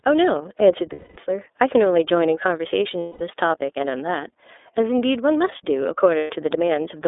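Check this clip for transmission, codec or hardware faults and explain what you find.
Two faults are present: narrowband iLBC coding throughout, and three dropouts concealed by the decoder.

iLBC codec, whole clip: speech sits in a 300 Hz to 3.6 kHz band and sounds rough and synthetic, which fits 30 ms frames at 13.33 kbps. A spectrogram shows an empty band above 4 kHz.

Lost iLBC frames at 0.92–1.18 s (240 ms), 3.00–3.21 s (210 ms) and 6.17–6.30 s (120 ms): the decoder repeats the last pitch cycle with added noise, producing a held, buzzy vowel that fades before speech snaps back. On a spectrogram, the harmonics stay flat and smear. In the waveform, the repeated cycles shrink in amplitude.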